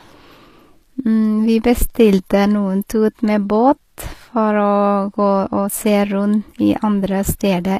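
Speech with audible HE-AAC compression throughout: s sounds turn gritty and metallic, likely from band-replicated treble at roughly 24 kbps. A spectrogram shows blocky copied upper bands and a sharp cut-off near 14.9 kHz.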